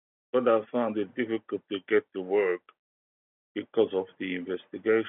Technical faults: none

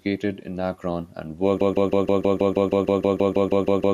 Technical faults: broken-record loop

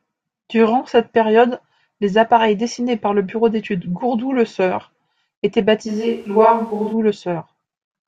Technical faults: switch to a distant microphone

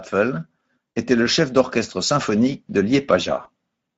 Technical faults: Speex codec; VoIP packet loss concealed by the speech codec

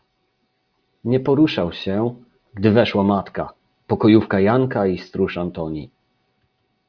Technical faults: none

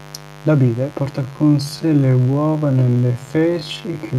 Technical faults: mains buzz; time-stretched section

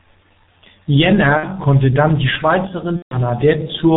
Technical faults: G.723.1 codec; VoIP packet loss concealed by the speech codec

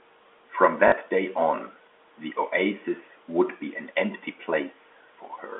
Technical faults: packet loss with last packet repeated

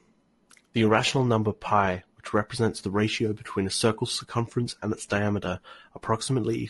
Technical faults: low-delay AAC compression

